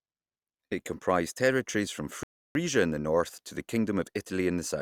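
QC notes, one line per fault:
2.23–2.55 s, rebuffering stall: after "comprised territories from" the speech drops to silence for about 0.32 s, then resumes at "in the north to" with nothing lost.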